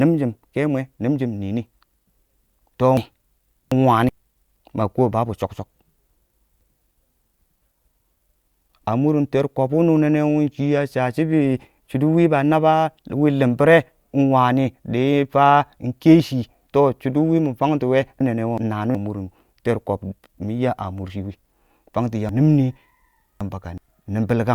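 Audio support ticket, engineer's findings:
Jumbled, garbled speech at 2.97–4.09 s, 18.20–18.95 s and 22.29–23.78 s. Chunks out of order: one 0.37 s block arrives late, playing two, one and three blocks behind its place respectively. Likely jitter buffer or write-queue reordering.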